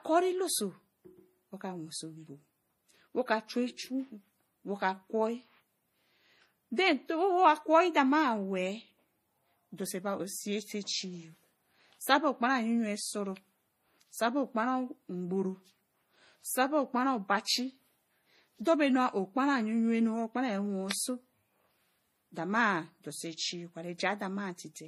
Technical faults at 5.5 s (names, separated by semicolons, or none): transcoding between lossy codecs